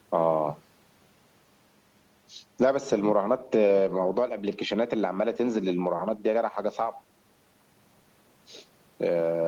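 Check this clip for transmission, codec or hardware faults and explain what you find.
On listening, nothing stood out in this recording.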